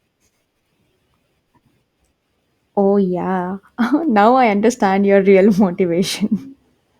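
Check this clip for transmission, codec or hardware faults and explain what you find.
Nothing wrong can be heard anywhere in this speech recording.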